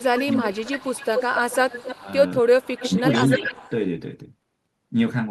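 From 0.0 to 1.94 s there is echo leak: a copy of the speech returns about 266 ms late, roughly 10 dB below it, most likely from a loudspeaker endpoint whose echo canceller let part of its microphone pickup through. It recurs from 2.61 to 3.7 s at a 273 ms delay.

Overlapping the first stretch, between 0.0 and 1.03 s, is speech suppressed in double talk. For well under a second in total, the speech dips by up to about 15 dB, likely because the canceller, unable to separate the talker from the echo, turned both down. Shorter dips follow at 1.92–2.08 s (about 15 dB), 2.82–3.06 s (about 10 dB) and 3.38–3.54 s (about 5 dB).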